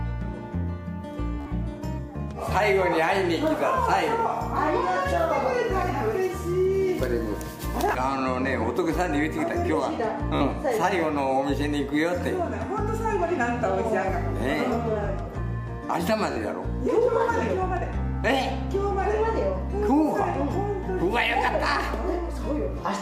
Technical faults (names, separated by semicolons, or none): Bluetooth stutter